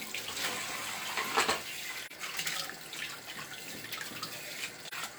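An everyday-sound recording with AAC frame loss with muting at 2.06–2.12 s and 4.85–4.94 s. Each dropout is a brief dip of about 43 ms, which fits a single lost frame. The decoder zeroed that frame's spectrum, and overlapping windows faded the sound out and back in.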